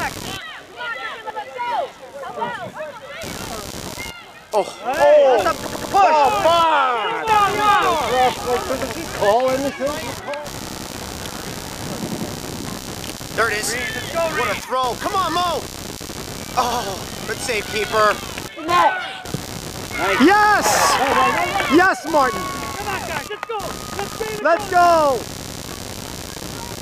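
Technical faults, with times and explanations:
Throughout: computer activity noise. A buzzy, pulsing layer repeating at roughly 70 Hz sits around 15 dB below the main sound. Its level rises and falls with the computer's processing load rather than with the audio. Load changes in the machine shift the shared ground of the audio circuit, and that shift leaks in as interference. A spectrogram shows a ladder of evenly spaced harmonics of that pulse rate. The waveform carries a fine ripple even in quiet stretches.
1.30–1.39 s, 5.67–5.94 s, 8.82–8.92 s, 10.68–10.87 s, 12.07–12.26 s, 16.72–16.81 s, 20.43–20.53 s, 25.36–25.64 s: repeated buffer. Each time, a piece about 93 ms long, which fits a 4096-sample buffer, plays again because fresh audio did not arrive in time. The result is a stutter with a hard join at each repeat. It sounds twice in the short events and up to four times at 5.67 s and 25.36 s. 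A waveform shows identical blocks side by side. A spectrogram shows copied vertical slices with sharp edges at each seam.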